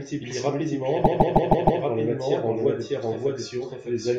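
A doubled audio track runs through the whole clip. Most likely the same speech is being captured a second time by a slower path and mixed back in, so a second full-band copy trails the original by roughly 0.7 s at about the same loudness. Because that copy carries no decay or room colour, it sounds like a dry, exact echo of every phrase rather than reverberation.

From 1.03 s to 1.82 s the stream hits repeated frames. A short run of compressed data was written or sent more than once, so the decoder replays the same 157 ms block five extra times in a row. The result is a rapid mechanical stutter, the identical fragment looping at a steady rate instead of moving forward, and those repeats stretch the audio by about 0.78 s.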